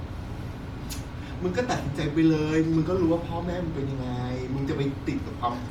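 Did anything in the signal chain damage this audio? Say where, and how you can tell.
Yes, at the codec stage: the speech carries a breathy, grainy edge throughout, with nothing above 20.2 kHz, likely Bluetooth LC3 compression, consistent with 48 kbps and 10 ms frames.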